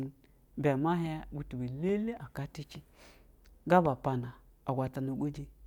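No technical faults are audible.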